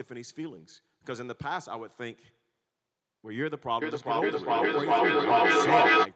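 From 3.82 s to 6.12 s there's feedback echo between two devices. A second device in the room replays the call and the mic picks it up again, so speech keeps coming back roughly every 0.4 s, ringing and building to about 10 dB over the speech itself.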